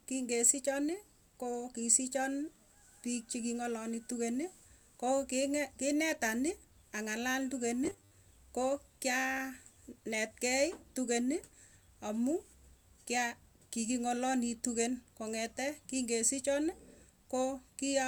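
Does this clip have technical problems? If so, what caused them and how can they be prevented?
Yes. From 7.84 to 8.14 s the speech becomes a rigid, metallic 100 Hz buzz: robotic sound from repeated short buffers. New audio likely arrived too seldom, so a 10 ms chunk was looped over most of the real signal. A larger jitter buffer or steadier delivery prevents this.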